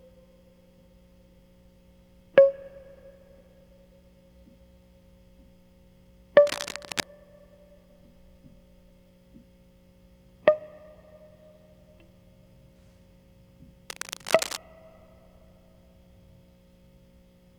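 A music clip with two bursts of cable scratch noise, 6.45 to 7.03 s and 13.90 to 14.57 s, rough rustling as loud as the music, then a bit quieter, likely a worn lead being moved.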